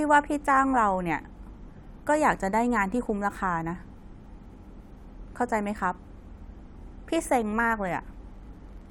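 No audible technical faults detected.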